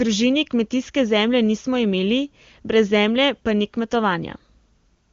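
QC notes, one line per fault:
No faults heard.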